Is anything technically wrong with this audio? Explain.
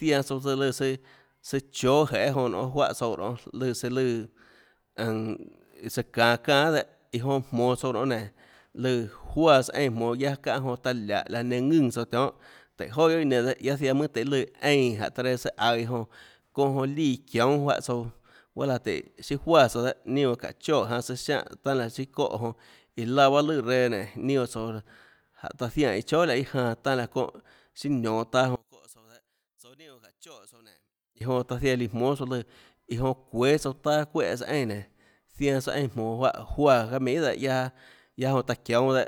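Yes. From 28.56 to 31.21 s the speech drops by about 27 dB and turns faint and distant, as though most of the signal has been cancelled. The likely cause is one channel inverted: with one stereo channel in reversed polarity, everything common to both channels cancels when they are summed to mono. Centred speech and low frequencies nearly disappear, leaving only the small left-right difference as a faint residue until normal level returns.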